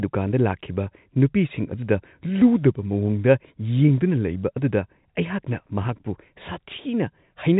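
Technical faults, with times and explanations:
No technical faults are present; the speech passes through G.711 telephone coding as normal, with nothing above about 3.8 kHz.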